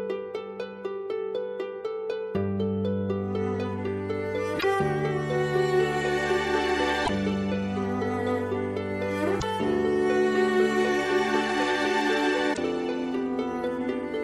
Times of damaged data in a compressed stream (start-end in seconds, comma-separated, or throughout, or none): 4.56-4.64, 7.02-7.10, 9.37-9.43, 12.50-12.58